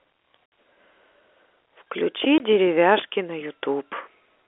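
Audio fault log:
0.46 to 0.52 s, packet loss filled with silence: the speech drops out dead for 60 ms, with hard edges because the signal is cut straight to silence and back, which fits three consecutive 20 ms packets lost.
2.38 s, packet loss filled with silence: a shorter 20 ms hole, the same hard-edged gap, pointing to a single lost packet. The narrow telephone band around it stays steady.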